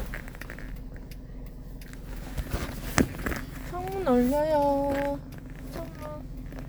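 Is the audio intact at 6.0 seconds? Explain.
Yes, at 6.0 seconds the audio plays through intact, with no dropout, click or other fault at that moment.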